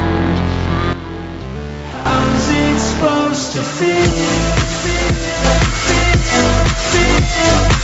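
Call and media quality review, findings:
Gain pumping throughout. Gain ducks about 10 dB under each loud sound, squashing dynamics. Likely an overdriven input gain with a fast limiter. Band tops out near 8 kHz.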